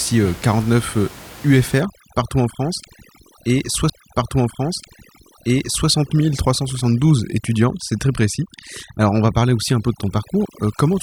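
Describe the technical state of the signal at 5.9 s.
At 5.9 s, a stream segment was repeated: the player queued the same two seconds twice, so the audio from 3.89 to 5.89 s replays and ends just before this point. Overdone noise removal, running from 1.81 s to the end, is also active here. It suppresses frequency bands near its noise estimate, so the room noise, about 20 dB below the speech, breaks into twinkling, warbling specks, and the speech can sound watery or thin.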